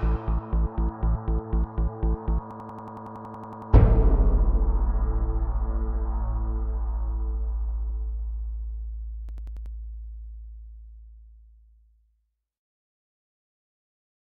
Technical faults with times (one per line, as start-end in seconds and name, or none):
2.51-3.72 system hang loop
9.29-9.75 system hang loop